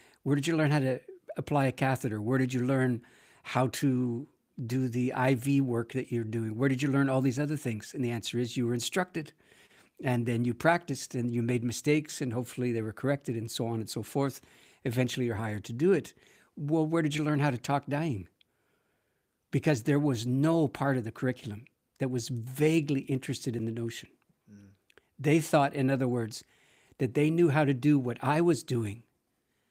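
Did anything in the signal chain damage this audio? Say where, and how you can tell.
No, nothing along the signal chain audibly damaged this speech recording, and the signal stays continuous and intact throughout.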